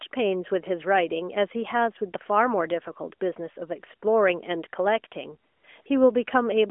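A speech recording carried over a narrowband mobile link with light AMR-NB coding, which fits a 12.2 kbps mode. It holds AMR comfort noise at 5.52 to 5.64 s and at 5.82 to 5.86 s. In those gaps the phone stopped sending speech frames. The receiver filled them with smooth synthetic noise in place of the real background.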